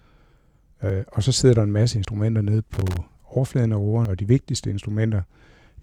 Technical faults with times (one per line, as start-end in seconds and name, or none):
0.90 dropped buffer (overrun)
2.05 dropped buffer (overrun)
2.74-2.97 loose connector crackle
4.05 dropped buffer (overrun)